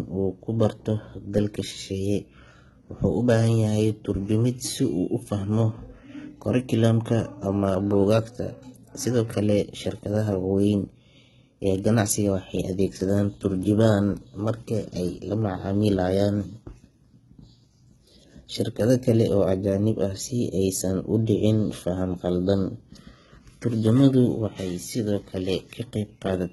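From start to finish the speech carries heavy HE-AAC compression damage, likely from a very low bitrate around 16 kbps. The top end is rebuilt rather than real, so s sounds come out gritty and lispy, and nothing survives above about 11.8 kHz.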